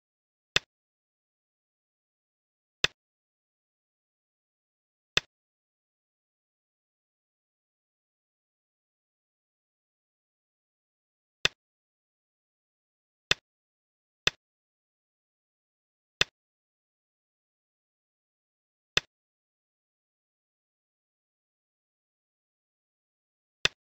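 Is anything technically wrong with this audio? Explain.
No, nothing technically wrong can be heard in this audio. No part of the recording shows a fault that needs explaining.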